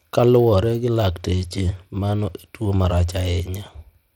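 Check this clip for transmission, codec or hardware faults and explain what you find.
One fault runs through the whole speech clip: Bluetooth SBC compression, likely from a Bluetooth link coding the signal at a low rate. The sound points to a budget of around 96 kbps. At that rate SBC splits the signal into a few wide frequency bands and shares out bits without modelling what the ear can hear, so each band is quantised coarsely. The damage is plainly audible as roughness laid over the speech, and the content stops at about 19.9 kHz.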